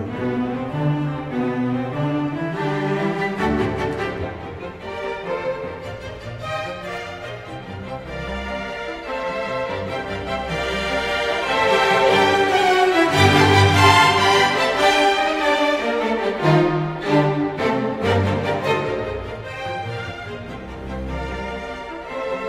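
No technical faults are audible.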